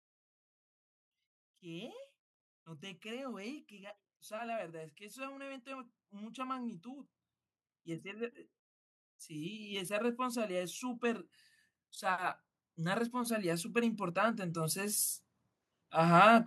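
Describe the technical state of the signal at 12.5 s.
At 12.5 s the level is climbing: speech and background noise swell together, steadily, from 11.99 s to 15.05 s, ending about 7 dB louder. This is automatic gain rising, where the automatic gain control judged the input too quiet and slowly raised its gain.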